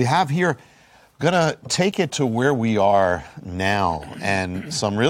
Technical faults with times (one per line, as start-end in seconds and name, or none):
none